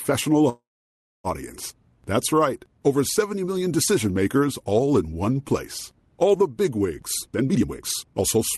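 A call audio freeze runs from 0.49 to 1.27 s. The last sound is stretched into a short fading buzz or hiss, then about 0.62 s of silence. The audio resumes exactly where it stopped, likely because delayed packets left the jitter buffer empty, which added roughly 0.75 s of delay.

A jitter buffer speed-up starts at 7.22 s and lasts to the end. The receiver trims many pitch-period-sized slices, about half a second in total, to shed excess buffered audio. The audio plays at 140% speed at unchanged pitch and sounds rushed through the codec's roughly 12 kHz band.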